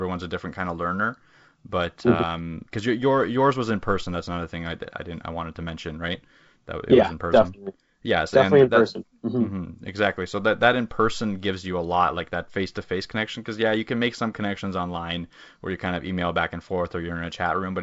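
No faults in this speech recording; content stops near 7.7 kHz with the light coding texture of G.722 wideband telephone coding, which fits its 56 kbit/s mode.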